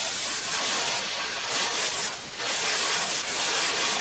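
From 0.51 to 1.92 s, and again from 2.09 s to the end, a delayed copy of the speech follows the original by 890 ms at roughly the same loudness, so the two overlap and blur. This is an echo leak, likely from a far end playing the call on a loudspeaker whose echo canceller failed to remove the returning sound. The echo shares the band limit at 8 kHz heard throughout the call audio.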